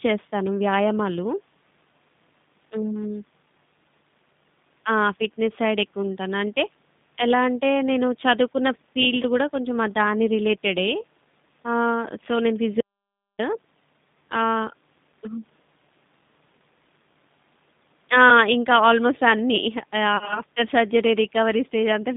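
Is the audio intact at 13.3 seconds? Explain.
No. An audio dropout to silence runs from 12.81 to 13.39 s. The signal vanishes into silence for about 0.58 s, most likely because the input was lost while zeros kept being written. Unlike a gate or fade, no room tone remains. Around that gap, G.729 coding at 8 kbit/s limits the band to roughly 150 Hz to 3.7 kHz and gives the sound its rough, synthetic timbre.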